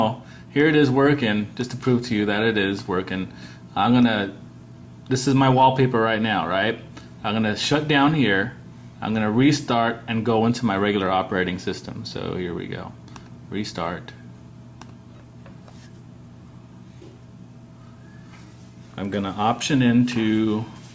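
Nothing stood out as a technical problem on listening.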